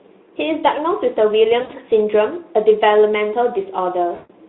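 At 1.61 to 1.72 s, and again at 4.15 to 4.33 s, VoIP packet loss concealed by the speech codec breaks the sound. The narrowband Speex decoder extrapolates from its last pitch and filter, stretching the speech into a buzzy tone or a coloured noise that fades. The gaps sound like about 80 ms and 140 ms, which fits four and seven 20 ms frames. On a spectrogram, flat, stretched energy smears across each gap. The waveform shows a decaying envelope before speech resumes, still weak or distorted for a short while.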